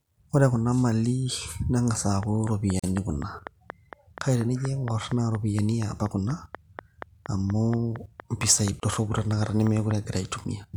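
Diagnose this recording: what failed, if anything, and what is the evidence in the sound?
A train of clicks runs from 2.23 to 9.92 s: about thirty similar pulses at a regular 4.2 per second, peaking roughly 10 dB above the speech, likely interference coupling into the analogue wiring or interface.

There are gaps at joins of encoded pieces at the codec stage: silences of 42 ms at 2.79 s and 31.5 ms at 8.80 s. Untrimmed encoder delay and end padding were left in where separately encoded segments were spliced.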